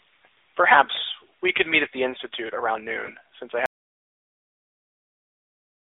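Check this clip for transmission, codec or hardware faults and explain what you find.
Three faults are present: narrowband mobile coding throughout, a lost speech frame, and a dropout to silence.

AMR narrowband mobile codec, whole clip: A vocal-tract model at low bitrate makes the speech buzzy and synthetic. The band runs about 300 Hz to 3.7 kHz, and the codec runs in its 10.2 kbps mode.

Lost AMR speech frames, 3.06 to 3.11 s: One frame, probably a single 20 ms frame, fails its check. The decoder repeats old settings at falling gain, causing a brief dip or warble.

Audio dropout to silence, 3.66 s to the end: The sound cuts off mid-flow into silence, with no room tone. The likely cause is lost input, with the recorder writing silence.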